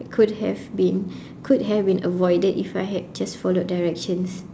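No technical faults are audible.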